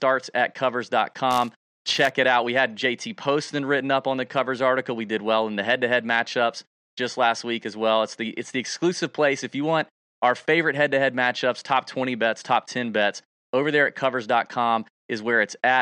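From 1.31 to 2.11 s the speech carries a fine, level-following buzz at 188 Hz, ending just before "it out". The cause is a filter restarted on every block: it drops its state each time, so every block, which fits a 256-sample buffer, begins with a small tick.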